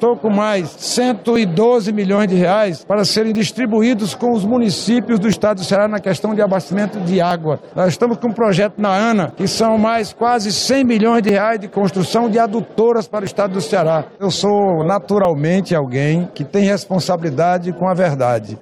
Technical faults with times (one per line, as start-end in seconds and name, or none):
1.36 overlap between stream segments
3.35 overlap between stream segments
5.33 overlap between stream segments
7.31 overlap between stream segments
9.31 overlap between stream segments
11.29 overlap between stream segments
13.27 overlap between stream segments
15.25 overlap between stream segments